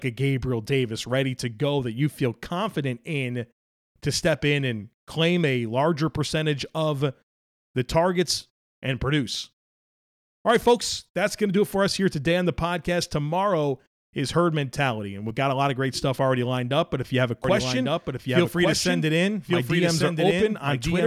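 A speech clip with a doubled audio track from 17.44 s to the end, beginning right after "if you have a". From that point a second full-band copy of the same speech runs about a second behind the original, roughly 5 dB quieter, with no reverberant tail or room colouring, and it cuts in abruptly. On a spectrogram the harmonic patterns reappear as a fainter, identical shifted duplicate. In the waveform the envelopes overlap and gaps fill in. The likely cause is a slower capture path or an edit leaving two copies out of step.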